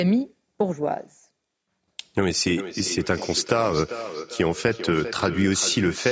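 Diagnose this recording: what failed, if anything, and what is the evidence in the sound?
In the call path, feedback echo between two devices runs from 2.57 s to the end: speech recurs roughly every 0.4 s, thinner and ringing, peaking about 11 dB below the direct signal. A second device replays this microphone where its echo canceller can't reach. A spectrogram shows fainter syllable copies 0.4 s apart.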